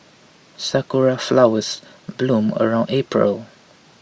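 Speech recording, no technical faults heard anywhere in the clip.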